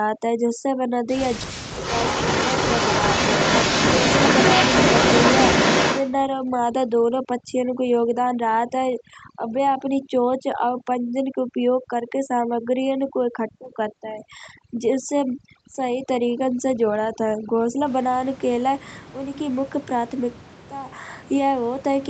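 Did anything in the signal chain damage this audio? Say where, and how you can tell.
Yes. Between 1.47 and 1.8 s the speech sinks by about 40 dB and breaks up, roughly a third of a second in all, which is speech suppressed in double talk. This is in the call processing stage, likely the echo canceller. With both ends active at once, it could not tell the near talker apart from the loudspeaker echo. It clamped down on everything, so the talker is cut out in pieces rather than passed through.

From 1.82 to 6.12 s a second copy of the speech trails the original by 317 ms, sitting close to the level of the direct sound. That is echo leak, again in call processing. The far end's echo canceller likely failed to remove what its microphone picked up from its own loudspeaker and sent it back. The fixed delay fits that round trip through the call. The echo rides on the Opus path, whose bandwidth stops at 8 kHz.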